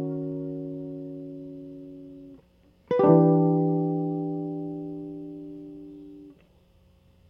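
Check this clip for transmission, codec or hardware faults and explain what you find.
Nothing stands out in this music clip; I couldn't pick out any transmission, codec or hardware problem anywhere in it.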